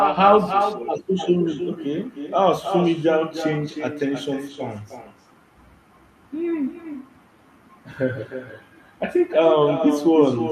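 Throughout, echo with no canceller: each phrase returns about a third of a second later, roughly 7 dB quieter, as a distinct thin copy rather than smeared room reverb.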